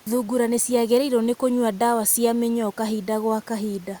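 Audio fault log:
No faults are heard in this speech clip. A faint room noise sits about 32 dB below the speech, part of the recording space rather than the system.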